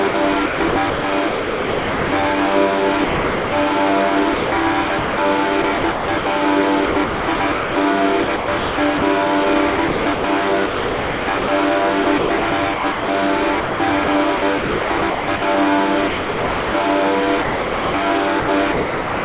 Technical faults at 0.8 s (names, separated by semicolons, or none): sound chopped by the voice detector